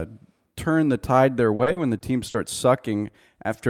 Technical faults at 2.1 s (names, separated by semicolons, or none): repeated packet loss (robotic sound)